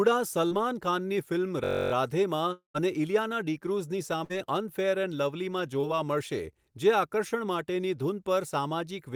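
At 0.47 to 0.53 s the speech gives a brief smear, a short packet loss that was concealed. About 40 ms never reached the decoder in time, so the receiver stretched the preceding sound across the gap and then blended back into the real audio.

From 1.64 to 1.92 s a steady buzz of about 47 Hz replaces the speech. This is a system hang loop. One 21.33 ms piece repeats 13 times while the computer or driver stalls and the sound hardware keeps cycling its ring buffer. The loop length fits a 1024-sample buffer.

Between 2.53 and 2.76 s, just before "અને ઇલિયાના ડીક્રૂઝની", the last sound turns into a fading buzz and then about 120 ms of silence. The speech resumes further along with roughly 220 ms gone. The likely cause is a long network dropout during which no audio arrived and the receiver could only extend and fade what it last had.

Right after "અને ઇલિયાના ડીક્રૂઝની", at 4.24 to 4.39 s, there is a burst of packet loss. 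The sound is held and turned down as it goes, and then the speech picks up about 60 ms further on. Several consecutive packets arrived too late or not at all, so the receiver bridged the hole with concealment and skipped the missing stretch.

At 5.81 to 5.85 s a second short concealed packet loss gives a quick wobble as about 20 ms is filled from the previous sound.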